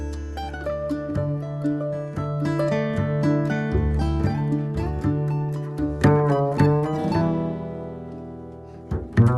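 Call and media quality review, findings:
Short stall from a late packet, 6.79–6.85 s: sound held about 27 ms too long, then resumes where it left off, nothing lost. Jitter buffer ran dry waiting on a late packet; receiver stretched the last sound, adding 27 ms of delay. Opus call path, band-limited near 12 kHz.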